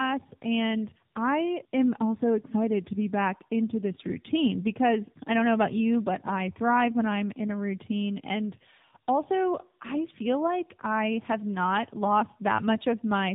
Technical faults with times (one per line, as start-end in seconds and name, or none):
0.00-13.34 tandem speech coding